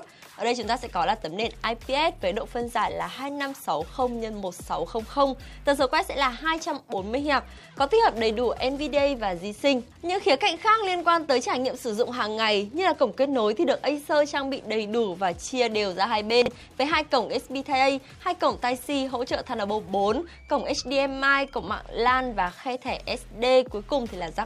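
At 16.42 s and again at 18.78 s the audio shows chunks out of order. A block of roughly 20 ms arrives late and plays after the blocks that should follow it, displaced by two blocks in the first case and three in the second. The scrambled stretches run 16.42–16.48 s and 18.78–18.86 s. Nothing is missing, but each spot sounds like a brief jumbled stutter with three hard joins.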